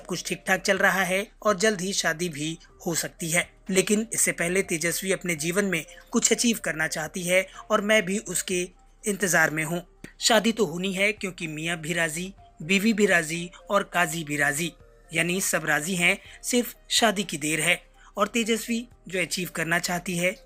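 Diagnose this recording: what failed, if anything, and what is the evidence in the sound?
Nothing stood out on listening that would point to a failure at any stage of the chain.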